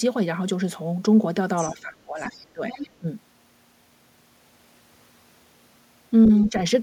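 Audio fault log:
1.56–1.74 s, 2.18–2.27 s, 2.70–2.89 s and 6.42–6.50 s, other side's voice leaking through: short scraps of a second, fainter voice sit under the talker, about 20 dB, 30 dB, 15 dB and 25 dB below the speech respectively. The likely cause is the far end's loudspeaker playback reaching the microphone, with the echo canceller leaving this residue behind instead of removing it fully.
1.73–2.63 s, 3.00–3.08 s and 6.50–6.54 s, speech suppressed in double talk: the talker's level dips while the far side is playing. The first stretch is the longest, with roughly 700 ms affected and the level pulled down by around 20 dB at its deepest. The second drops by a similar depth for about 70 ms, and the last is a shallow dip of around 5 dB lasting about 40 ms. The likely cause is the echo canceller failing to separate near-end speech from echo and attenuating both together.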